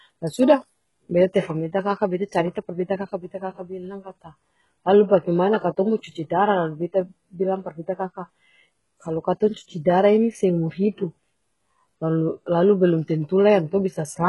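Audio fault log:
throughout: HE-AAC compression. The speech has a bright but synthetic treble, and nothing is present above 11.5 kHz. The top band does not match the lower harmonics, so sibilants turn gritty and metallic. The damage is heavy. The likely cause is a codec that codes only the lower spectrum and rebuilds the highs by copying lower bands upward under a coarse envelope. The sound fits a stream of about 12 kbps.
9.54 to 9.56 s: pre-echo. A short hiss of about 25 ms runs just ahead of a sharp attack, and the onset sounds softened and smeared. The codec spread its quantisation noise across the whole block. That noise was sized for the loud attack near the block's end. So it also filled the quiet moment before the attack, where nothing masks it. The hiss is heard as a brief smear leading into the transient.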